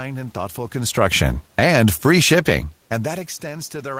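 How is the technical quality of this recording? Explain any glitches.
The recording has one glitch, an automatic gain fall. From 0.98 to 2.66 s, just after "and thoughtful", the gain control judges the level too hot or the background noise too strong and pulls its gain down by about 3 dB. Unlike the talker shifting position around 0.5 and 2.5 s, this dip lowers the room noise along with the speech.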